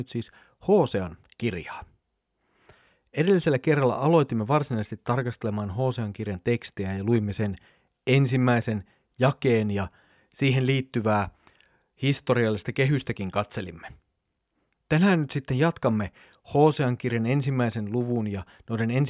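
Nothing stood out on listening to this speech recording.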